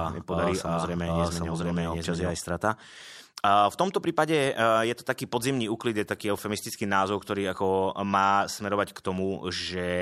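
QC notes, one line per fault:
0.0–2.3 s, doubled audio track: likely a slower second capture path or an out-of-step edit mixing the speech in twice. An equally loud, dry copy trails roughly 0.7 s behind, already present from the start, and cuts off abruptly at 2.3 s.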